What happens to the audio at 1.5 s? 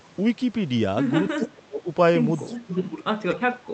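The speech at 1.5 s is caught in speech suppressed in double talk, which runs from 1.36 to 1.88 s. The level falls sharply, by roughly 30 dB at its deepest, and the speech thins and breaks into pieces for about half a second. This is likely an echo canceller that heard both sides at once and attenuated everything it couldn't separate. On a waveform the envelope collapses into a notch with ragged fragments. On a spectrogram the energy fades to faint patches, with the upper bands going first below the call path's 8 kHz ceiling.

Just before this, from 1.28 to 1.48 s, there is an echo leak. A faint, delayed copy of the speech, roughly 20 dB down, arrives 292 ms behind the original, probably from a loudspeaker-to-microphone path that the canceller didn't fully clear. It sounds like a ghost trailing the talker. On a spectrogram it appears as a weak repeat of the harmonic pattern, shifted about 0.3 s later, and on the waveform it shows as low-level ripple beneath the main signal.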